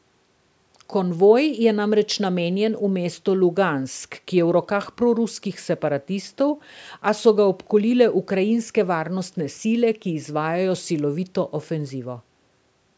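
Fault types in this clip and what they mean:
No faults stood out on listening; this speech has passed through call microphone processing, and nothing above 8 kHz can be heard.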